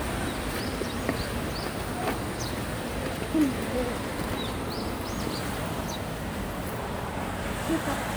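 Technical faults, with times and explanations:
Nothing here stands out as a technical fault, so there's nothing to flag anywhere in the sound.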